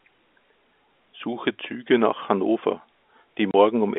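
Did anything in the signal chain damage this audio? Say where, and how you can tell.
Yes, network packet loss filled with silence at 3.51 to 3.54 s: a 30 ms hard-edged gap, which fits three lost 10 ms packets.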